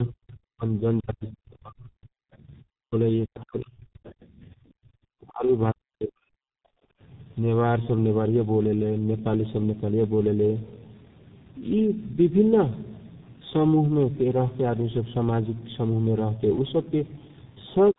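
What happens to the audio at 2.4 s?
Right around that moment, from 2.32 to 2.37 s, a very faint scrap of a second voice slips in underneath the talker, far below the main speech at roughly 40 dB down, cut off almost as soon as it appears. This is the other side's voice leaking through, most likely because the far end was playing from the talker's loudspeaker and the echo canceller left a brief residue in the microphone signal.

At the same point, as across the whole recording, the speech sounds rough, muffled and warbly, with nothing above about 3.8 kHz. That is tandem speech coding: the call passed through two speech codecs in succession, with the sound suggesting a chain such as G.726 at 24 kbit/s through G.711 A-law at 64 kbit/s into G.723.1 at 6.3 kbit/s. The second coder re-encoded the already degraded output of the first, so their losses stack.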